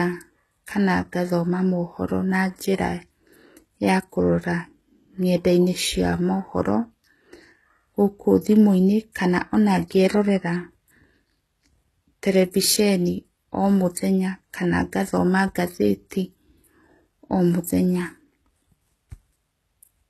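Throughout the speech, treble sounds bright but synthetic and s sounds grit and lisp up to a 12.3 kHz ceiling. That points to likely HE-AAC compression near 16 kbps, not plain dull low-passing.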